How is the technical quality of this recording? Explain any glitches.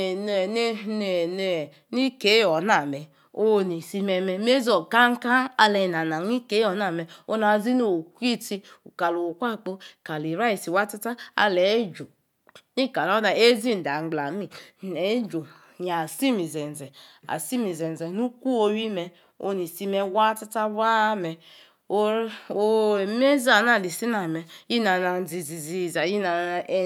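No glitches can be heard.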